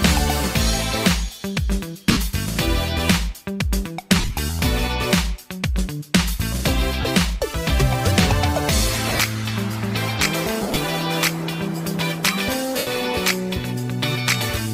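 Lost LE Audio frames break up the sound at 2.06–2.17, 4.19–4.37, 7.01–7.05, 9.09–9.20, 10.61–10.76 and 12.78–12.87 s. In each, roughly 40 to 110 ms of audio went missing, and the LC3 decoder filled the gap by repeating the last spectrum with scrambled signs. Tones therefore smear into a hissy wash instead of the click or hard silence of a plain dropout. The short, scattered runs are consistent with 7.5 ms frames.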